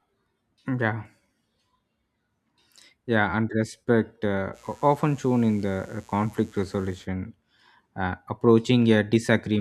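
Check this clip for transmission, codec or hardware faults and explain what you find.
One hardware fault is present: mains buzz from 4.52 to 7.08 s. Sharp switching spikes, entering twice per 60 Hz cycle through a dimmer, rectifier or unshielded path, build a harmonic series up to several kHz, heard as a steady raspy buzz roughly 35 dB beneath the speech.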